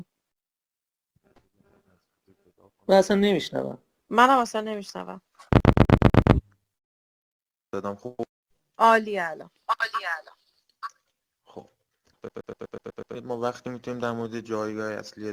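At 5.60 s the audio catches and stutters until 6.35 s. This is a CD stuck on one turn. A scratch throws the laser back one track each time the disc comes round. So a slice of about 124 ms plays six times over, with a brief mute at every jump. It sounds fast and even, like a skipping CD. The same fault returns at 12.29 s and runs to 13.15 s. It repeats a slice of the same length seven times at the same rate.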